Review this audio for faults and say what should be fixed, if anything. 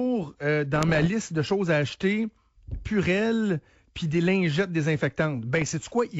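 Bit errors on an ADPCM link hit 0.74–1.08 s, right before "de choses à acheter", and again at 5.59–5.73 s. Flipped bits throw off the decoder's step size and predictor, so you get rough pops and level jumps. Better error protection on that link would fix it.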